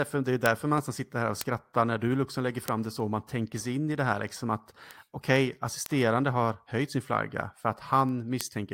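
A speech recording with sharp ticks of uneven strength at a steady rate of about one every third of a second, some 30 in all, running from 0.14 s to 8.73 s. These are word clock ticks: the receiving device's clock runs about 70 ppm off the sender's, so each slip drops or repeats one sample.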